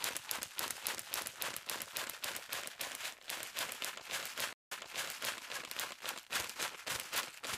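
At about 4.53 s there's a stream reconnect. The connection dropped, the player went quiet for roughly 170 ms, then reconnected and spun up a fresh decoder partway into the stream. When the sound comes back it has jumped backwards by about 0.67 s, because the server resent a burst of earlier audio. So you hear a short gap and then a bit of the recent sound replayed, with the disturbance settled by around 5.38 s.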